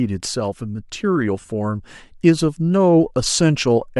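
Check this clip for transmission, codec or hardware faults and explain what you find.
One transmission fault is audible: a short burst of lost LE Audio frames in the speech. From 1.41 to 1.49 s, about 60 ms of audio goes missing. The gaps are scattered over 80 ms, and the longest run is around 30 ms. The sound likely passed through Bluetooth LC3 compression, and the gaps fit its 10 ms frames. For each missing frame, the decoder repeats the last spectrum with random signs. So the speech turns briefly into a rough, noisy smear instead of falling silent.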